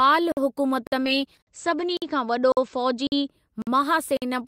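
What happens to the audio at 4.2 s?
A gap between chunks opens from 4.17 to 4.22 s. The speech stops dead for 50 ms, then resumes. The audio appears to be delivered in 0.5 s chunks, and silence is inserted at this join. Nothing is lost. The sound is interrupted by a short hole.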